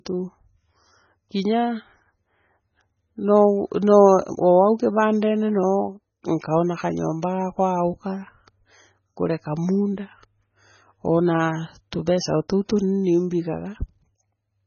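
From start to finish the speech carries heavy MP3 compression damage, likely from encoding at a very low bitrate, on the order of 16 kbps. Nothing survives above 6.6 kHz, so the treble stops at a hard ceiling. What separates this from a plain low-pass filter is the watery, swirling texture below that ceiling: faint frequency components flicker in and out between frames, s sounds turn metallic and chirpy, and consonant onsets smear.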